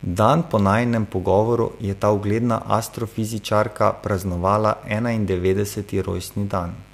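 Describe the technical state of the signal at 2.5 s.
Mains buzz runs through 2.5 s and the whole clip: switching spikes from a dimmer, rectifier or unshielded lead, twice per 50 Hz cycle, add harmonics reaching several kilohertz. Roughly 30 dB beneath the speech, it sits as a steady, raspy buzz.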